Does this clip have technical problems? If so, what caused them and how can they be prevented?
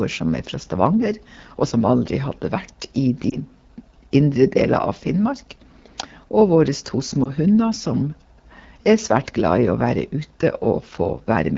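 Yes. Throughout, the speech sounds rough and raspy, the signature of the AMR wideband (HD Voice) codec at a low rate. That points to about 8.85 kbit/s. The grain is constant and comes from the sparse pulse model, so it is not noise or clipping. Prevention: allow 12.65 kbit/s or higher.

Brief dips or warbles at 3.30 to 3.38 s and again at 7.23 to 7.31 s are lost AMR speech frames. The decoder briefly repeats its last pitch and vocal-tract settings at falling gain, which fits a single 20 ms frame each time. Unlike a dropout to silence, the sound smears and recovers. Prevention: improve radio coverage.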